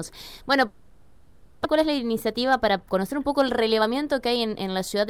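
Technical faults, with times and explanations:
0.67–1.66 s, long network dropout: for about a second the sound is replaced by a continuation of what came just before, a buzzy, hissing tail that fades rather than cutting to silence. This is likely a stretch of lost packets concealed by the receiver. About 600 ms of the original never returns, so the sound resumes further along. On a spectrogram, smeared, repetitive bands decay across the gap. The waveform shows a tapering, patterned envelope rather than a flat line.
1.75–5.07 s, jitter buffer speed-up: after the gap, the receiver is holding a backlog of roughly 400 ms and drains it by cutting out pitch-period-sized slivers again and again. Playback runs at about 109% speed with unchanged pitch, so the sound feels hurried and rhythm tightens unnaturally, with something like 300 ms removed in total. A spectrogram shows harmonics at normal spacing but compressed in time, with tiny discontinuities at the splice points. 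The waveform shows periodic cycles repeatedly shortened.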